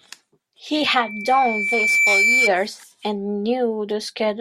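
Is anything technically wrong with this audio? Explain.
Yes. From 0.74 to 2.52 s, a 2.3 kHz tone swells to roughly 5 dB above the speech. This is loudspeaker feedback squeal: the microphone picks up its own loudspeaker, and the loop runs away at that pitch.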